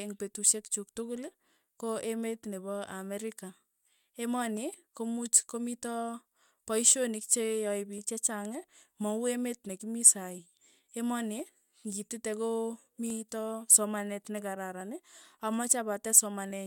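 From 1.17 s, just after "petushek chuk", to 16.51 s, a click recurs every 1.71 s, about ten times. These are likely clock drift buffer slips. Two clocks disagree by roughly 200 ppm, so a short block of samples is dropped or repeated.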